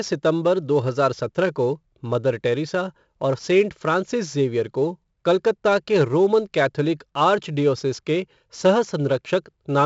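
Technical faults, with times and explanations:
Throughout, 4-bit ADPCM compression: each sample is stored as a coarse 4-bit step from a predicted value, so a gritty hiss rides on the speech, growing on loud syllables and dropping away in pauses. Sharp onsets smear and distort where the step size lags behind. Nothing is heard above 7.7 kHz, and the 64 kbps rate fits a 16 kHz sample rate. Unlike a steady noise floor, this hiss follows the signal's level.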